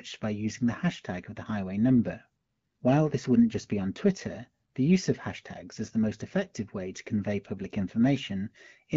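No technical faults occur in this speech, which is carried by an AMR wideband (HD Voice) codec at 12.65 kbit/s.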